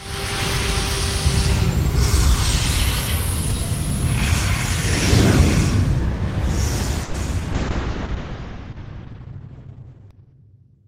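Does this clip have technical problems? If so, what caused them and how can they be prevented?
Yes. A call audio freeze runs from 7.03 to 7.16 s. The sound stalls and its last moment is stretched into a fading buzz for about 110 ms, with no true silence. It then resumes where it stopped, so nothing is lost but the stream now runs 110 ms later. Packets were likely held up in transit until the jitter buffer ran dry. A more stable network path or an adaptive jitter buffer with more headroom would prevent it.

Short concealed packet loss follows from 7.26 to 7.41 s. Roughly 20 ms of audio never reached the decoder in time. The receiver bridged the hole with about 10 ms of extrapolated sound before blending back into the real signal, which leaves a brief smear or wobble and adds around 15 ms of delay. Forward error correction or redundant packets would let the receiver rebuild the missing audio instead of guessing it.

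A call bitrate drop starts at 7.53 s and lasts to the end of the clip. The bandwidth estimate collapsed, so the encoder fell from 32 kbps to 6 kbps and stayed at its lowest for 2.8 s. At that rate the coding turns coarse and watery, and the audio bandwidth narrows from 20 kHz to 6 kHz, which makes the sound muffled. Smoother congestion control with a sensible minimum bitrate floor would prevent such a steep drop.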